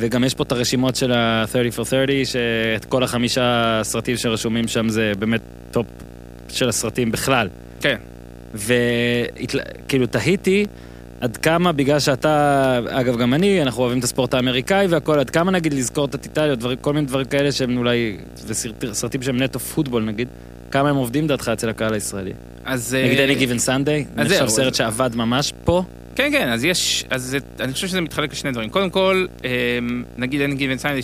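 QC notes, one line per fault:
Throughout: video or display buzz. A 60 Hz buzz with a hash of harmonics above it sits about 20 dB below the speech, which fits a screen or video cable coupling into the audio path at its field rate. A spectrogram shows steady horizontal lines at 60 Hz and its multiples.
0.14 s to 30.89 s: periodic USB or driver dropouts. Every 0.25 s a tiny slice of audio, well under a millisecond, is replaced by silence. This is heard as a regular ticking during speech, from a task stalling the bus or driver. The waveform shows evenly spaced notches, and the spectrogram shows thin vertical lines.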